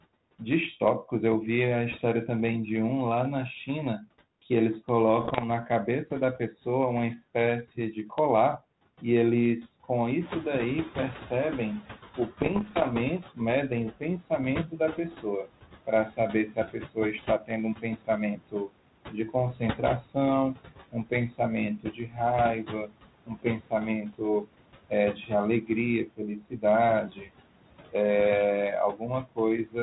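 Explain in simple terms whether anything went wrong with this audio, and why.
Noise suppressor artifacts run through the whole recording: the background is pushed down between words and rises beneath them.

Speech cut by the noise suppressor happens at 3.67 to 4.08 s, 7.76 to 9.03 s, 13.34 to 27.94 s and 28.93 to 29.76 s. The suppressor mistook quiet parts of speech for noise, so word endings and soft sounds come out swallowed. The long middle stretch suffers most.

Bit errors on an ADPCM link appear at 5.21 to 5.46 s and 12.40 to 12.85 s. Corrupted data throws the decoder off for a moment, causing pops and rough, crackly bursts that briefly jump in level.

The noise suppressor is catching up from 10.2 to 13.28 s. The room noise suddenly gets louder around 10 s, so at first it comes through with less reduction, then fades over about three seconds as the suppressor adjusts.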